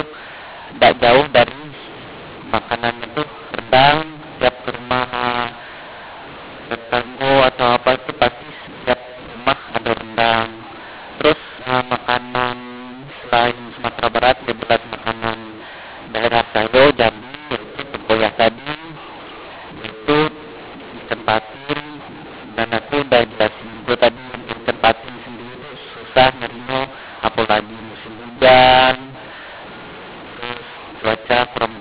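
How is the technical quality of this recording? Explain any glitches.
Pretty rough, honestly. The whole thing has one fault running start to finish. It's mu-law and A-law mixed up: A-law telephone coding decoded as mu-law, so levels get scrambled, speech turns harsh and gritty, and pauses fill with hiss. Underneath that, the usual 8 kHz telephone sampling is there.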